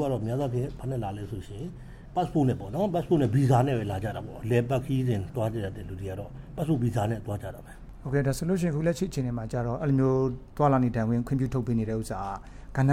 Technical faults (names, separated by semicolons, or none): none